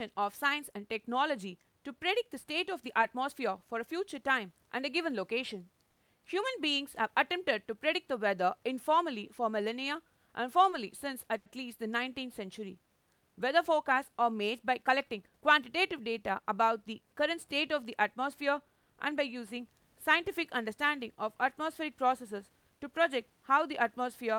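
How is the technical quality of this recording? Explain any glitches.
The recording has three audible glitches: two brief stalls and one short rush.

Around 5.91 to 6.00 s and 11.38 to 11.49 s, the speech briefly holds a sound too long with a faint buzz or dip. These are short stalls from a late packet: an empty jitter buffer was bridged with about 60 ms and 80 ms of stretched audio, with nothing lost.

From 14.89 to 15.42 s, the speech sounds hurried but keeps its pitch. This is a jitter buffer speed-up at 111% speed, which trimmed roughly 70 ms of excess buffered audio in small pitch-period slices.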